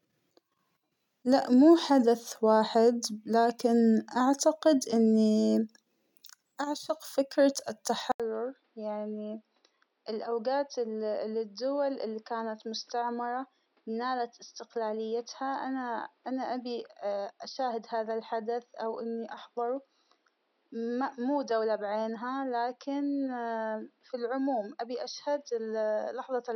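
Speech that, at 8.12 s, just after "اعشق فكرة", goes silent for 80 ms, then continues about 10 dB quieter, duller and boxier, with nothing above 5.8 kHz and faint new background noise, through the end. This fits an input switched to a poorer device.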